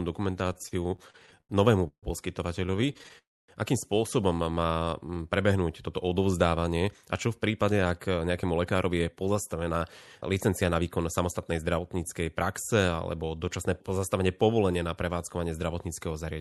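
This is speech carried over a call link, with the top end rolled off around 12 kHz, and it has a run of jitter-buffer trouble. From 0.53 to 1.51 s there's repeated stalls (stutter): about a dozen little hang-ups, the longest 88 ms, where the receiver keeps stretching the last sound while late packets trickle in. Roughly a quarter of that stretch is filler. It happens again, more finely chopped, from 2.67 to 3.16 s. There's also a call audio freeze at 1.87 to 2.05 s, a held buzz that drops to silence for about 80 ms before the audio picks up where it left off. A longer one at 3.18 to 3.50 s goes quiet for about 260 ms. Packets were likely held up in transit and the buffer ran dry. From 4.55 to 5.23 s a jitter buffer slow-down drags things to 80% speed at unchanged pitch, adding about 146 ms by repeating pitch periods to rebuild its reserve. Then the buffer sheds excess audio with jitter buffer speed-up from 6.80 to 9.77 s at 111%, trimming about 300 ms, and from 10.21 to 11.91 s at 107%, trimming around 150 ms. 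Both passages sound hurried at the same pitch.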